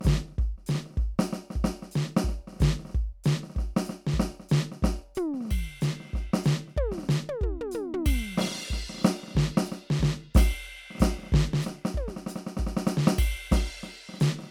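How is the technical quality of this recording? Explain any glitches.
The music carries generation loss across the whole recording. From start to end it sounds swirly, smeared and hollow, with blurred attacks and nothing above about 19.9 kHz. The likely cause is repeated lossy encoding, perhaps around five passes through MP3 at a rate consistent with 128 kbit/s. Each pass requantises on a shifted frame grid, so noise and spectral gaps accumulate.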